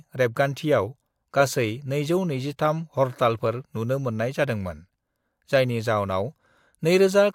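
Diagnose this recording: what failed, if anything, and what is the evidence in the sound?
Nothing failed in this recording. No stage of the chain, from capture through conversion, processing and playback, leaves any fault audible in the speech.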